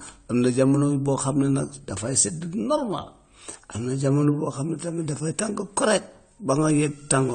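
It's a speech clip with codec damage that's plainly audible across the whole thing. Nothing comes through above 9 kHz, so the top end is simply gone, and the rest has that dull, smeared quality you get when too few bits are spread over the spectrum. That's likely AAC compression, AAC-LC at a low rate, and the damage fits something around 32 kbps, where the encoder drops its cut-off and starves the upper bands.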